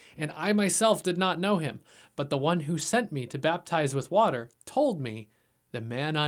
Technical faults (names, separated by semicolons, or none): lost packet rebuilt from error correction